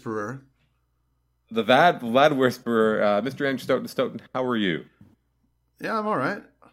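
No technical faults can be heard anywhere in the speech recording, with the signal holding steady and continuous throughout.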